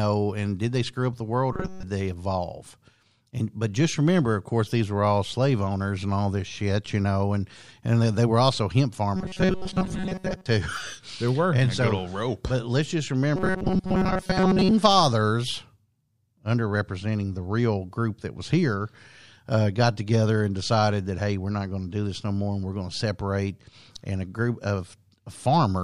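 At 1.53–1.83 s, 9.16–10.46 s and 13.36–14.71 s the speech becomes a rigid 188 Hz metallic buzz. This is robotic sound from repeated short buffers, likely a chunk of about 5 ms looping. A spectrogram shows flat harmonic stripes, and the waveform shows repeating cycles.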